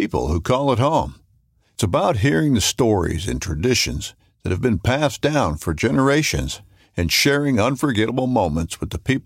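No technical faults can be heard anywhere in the recording. The speech continues without any audible interruption or defect.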